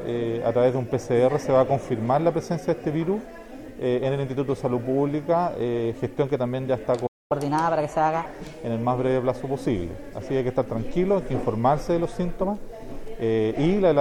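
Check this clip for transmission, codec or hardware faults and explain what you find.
Two faults sit together just past the middle of the clip.

A playback stall runs from 7.06 to 7.32 s. The sound stops mid-flow and the output goes silent for about 235 ms. The likely cause is a player that ran short of data, or a blocked playback thread. Sound then resumes.

Catch-up at higher speed follows straight after, from 7.32 to 8.26 s. The player plays its backlog at 1.25 times normal speed by resampling. Pitch rises with it, by roughly four semitones. The sound is audibly hurried and high, then drops back to normal.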